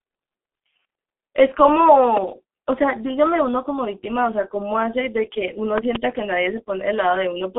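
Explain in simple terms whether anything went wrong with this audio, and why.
Yes, two things went wrong. The whole clip has been squeezed through the G.723.1 codec, an old internet-phone format that packs speech into very little data. It throws away everything above about 3.8 kHz, so the voice sounds muffled, as if heard down a phone line. It also rebuilds the voice in coarse steps, which makes it sound hoarse. Sharp sounds like s and t come out blurred and smeared.

There are also loud pops. The first is a single short pop from 2.17 to 2.19 seconds. The second is a pair of pops close together between 5.78 and 5.98 seconds, and it is the stronger of the two. Both jump out well above the speech, which keeps going underneath. The likely cause is a sudden electrical jolt, such as a plug being moved, a switch, static, or a glitch in the equipment.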